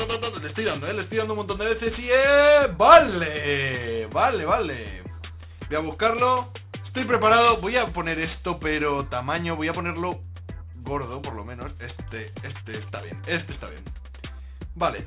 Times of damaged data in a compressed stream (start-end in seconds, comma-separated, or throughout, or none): none